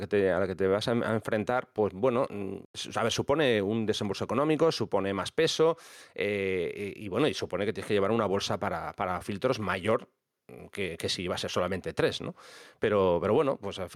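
All through the speech there's gain pumping: the level ducks around 5 dB under each loud bit, likely from a fast limiter chasing overdriven gain.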